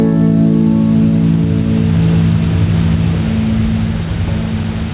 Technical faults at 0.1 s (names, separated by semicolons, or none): gain pumping